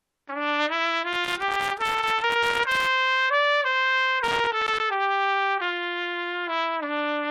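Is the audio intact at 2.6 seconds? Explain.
No. At 2.6 seconds the sound sits inside a burst of loose connector crackle running from about 1.13 to 2.87 s. A worn or dirty contact keeps making and breaking as it shifts, chopping the signal on and off, and any DC on the line adds pops. It is heard as irregular scratching over the sound. On a waveform it shows as ragged dropouts and sharp spikes; on a spectrogram, scattered broadband vertical streaks across that span.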